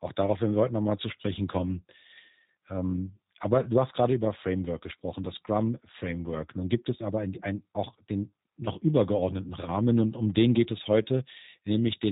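Throughout, the G.729 codec rebuilds the speech from a filter and pulse model, leaving nothing above 3.8 kHz. Unlike a simple low-pass, it adds a rough, synthetic buzz, which fits an 8 kbit/s coder.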